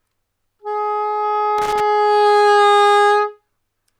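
Loose connector crackle from 1.58 to 1.80 s: a worn or dirty contact repeatedly breaks and remakes the signal path, chopping the sound into an irregular burst of scratchy crackle.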